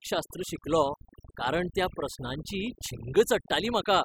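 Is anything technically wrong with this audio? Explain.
Yes. Throughout the speech, the background drops and breaks up into twinkling specks. This is overdone noise removal: the reduction was set so strong that bands near the noise estimate were cut almost away, taking quieter parts of the voice with them.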